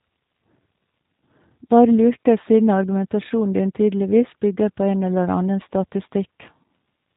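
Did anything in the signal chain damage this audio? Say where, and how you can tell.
Yes. Across the whole clip the speech sounds slightly rough and synthetic, with a buzzy, processed edge, and there is no audible content above about 3.8 kHz, so sibilants and breath are dull. The damage comes from the codec stage: G.729 compression, with a character that fits an 8 kbit/s G.729A stream. The codec rebuilds each 10 ms frame from a vocal tract filter, a pitch predictor and a few coded pulses, so fine detail is replaced by a model of speech.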